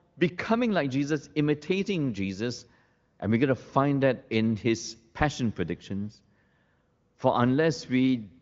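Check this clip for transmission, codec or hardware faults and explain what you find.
The speech comes through an AMR wideband (HD Voice) link with no transmission, codec or hardware fault to report; its band stops near 7.5 kHz, and the faint-to-absent coding damage fits one of the upper bitrates, around 23 kbit/s.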